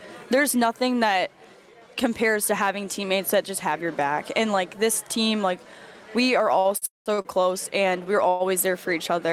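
Between 6.59 and 7.28 s the audio drags and stutters through five short gaps, the longest about 53 ms, each bridged by a held continuation of the preceding sound, filling roughly a quarter of that span. These repeated stalls (stutter) come from packets arriving late or too slowly, so the jitter buffer kept running dry while nothing was lost. There are also two call audio freezes. From 6.86 to 7.09 s the last sound is held and fades into about 160 ms of silence before resuming, and from 8.29 to 8.43 s a shorter hold of about 111 ms carries straight through without going quiet. Both likely come from packets held up in transit, emptying the buffer, so the audio picks up where it stopped and the gap adds delay without losing any material.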